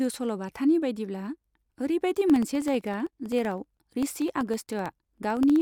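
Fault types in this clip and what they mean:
Periodic USB or driver dropouts: something stalls the audio path every 64 ms from 2.30 s to 5.56 s, and each time about half a millisecond of this speech is replaced by silence, some fifty times in all. It sounds like a fast, even ticking, about 16 per second, heard only while sound is present. On the waveform each tick is a tiny flat gap at zero; the spectrogram shows thin, evenly spaced vertical broadband lines.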